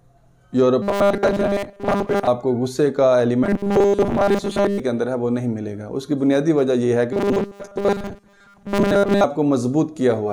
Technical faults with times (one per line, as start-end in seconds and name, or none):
0.82-2.28 robotic sound from repeated short buffers
3.44-4.80 robotic sound from repeated short buffers
7.13-9.24 robotic sound from repeated short buffers